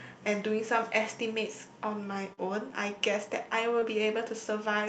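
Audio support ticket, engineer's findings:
Brief smear at 2.33–2.39 s, about 40 ms of sound held over from what came before. Short concealed packet loss: audio arrived too late for the jitter buffer, and the decoder extended the preceding sound before blending back.

Shorter wobble at 3.79–3.83 s, roughly 20 ms bridged. Same mechanism, a late gap concealed by the receiver. The call path's band limit near 8 kHz points to Opus in wideband mode.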